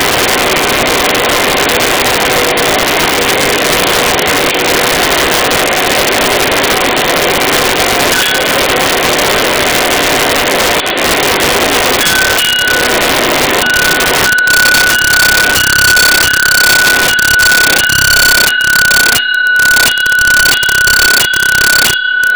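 Violent, sharp cracks break out on the loudest moments across the whole clip, harsher than ordinary clipping. This is integer overflow: the signal is driven about 8 dB too hot, and the few percent of peaks past the limit wrap to the opposite sign instead of being held.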